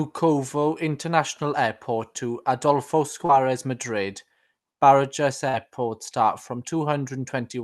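A brief smear appears at 3.25 to 3.31 s and again at 5.49 to 5.55 s. These are short concealed packet losses: about 40 ms of call audio arrived too late each time, and the receiver extended the preceding sound before blending back into the real signal.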